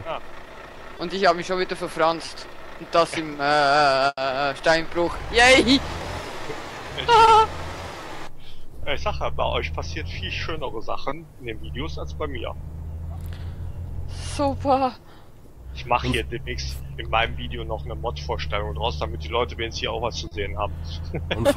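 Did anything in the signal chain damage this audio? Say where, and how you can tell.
Yes. Short concealed packet loss at 0.97, 2.25, 7.25, 11.09, 12.95 and 20.27 s points to the network stage. Each time, 20 ms of audio (40 ms at 20.27 s) failed to arrive in time for playout. The receiver papered over the hole by extending the preceding sound, pitched or noise-like depending on the material, then crossfaded back. Each one is heard as a tiny smear or wobble, and a brief transient can vanish inside the patch.

The burst of packet loss at 4.07 to 4.19 s comes from the same network path, but here 100 ms went missing in one run. The decoder carried the last sound forward and faded it as the gap lengthened, so a held buzz or thinning hiss stands in for the real signal, including about 30 ms that is near-silent. The audio then resumes further along, and the stretch in between is simply gone.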